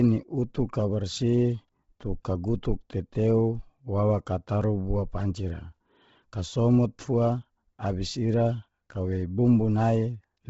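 Throughout the speech, nothing sounds above 7.7 kHz. The upper band is thin and noise-filled, with a breathy, grainy edge. The likely cause is heavy Bluetooth LC3 compression, which fits a low bitrate near 16 kbps and 10 ms frames.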